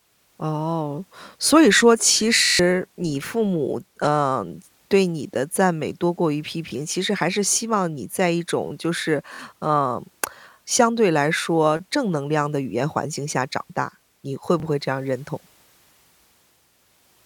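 Bluetooth stutter hits this speech at 2.45–2.60 s, 6.69–6.72 s, 9.34–9.39 s and 14.60–14.63 s: late or lost packets make the receiver repeat a roughly 23 ms slice, buzzing longest (about 140 ms) at 2.45 s.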